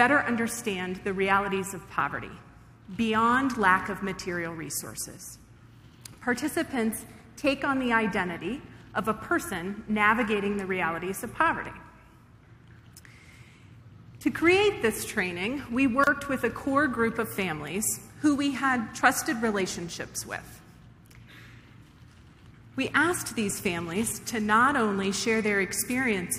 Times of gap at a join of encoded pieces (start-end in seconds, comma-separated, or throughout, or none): 16.04-16.07